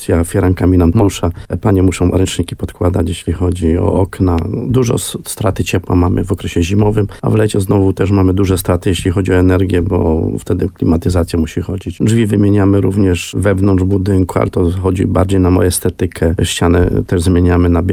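At 1.01 s there is a skip ahead. About 0.4 s of audio was discarded while later audio was already queued, so playback leaps forward with no gap. The waveform shows two unrelated segments butted together, and the spectrogram shows an abrupt vertical seam.

From 1.25 to 3.00 s, jitter buffer speed-up runs the sound at 109% speed with unchanged pitch. The receiver trimmed around 150 ms in short pitch-period slices to reduce excess delay. It sounds hurried, and a spectrogram shows harmonics at steady frequency but events slightly compressed in time.

At 4.39 s a single loud pop sits roughly 10 dB above the surrounding level while the sound continues beneath it. It is likely from a voltage step such as a switch, plug or static discharge. The waveform shows a tall narrow spike, and the spectrogram a thin full-band vertical line.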